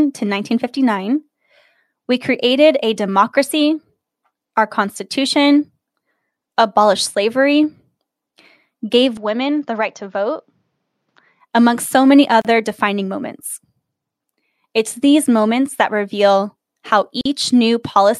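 Speech with an input switched to a poorer device, likely, from 9.17 to 11.41 s: the spectrogram shows nothing above 7.2 kHz, the waveform drops slightly, and faint new noise appears. Gaps at joins of encoded pieces, with encoder padding left in, show as blank vertical strips in the spectrogram and flat stretches in the waveform at 12.42 s (33 ms) and 17.21 s (44 ms).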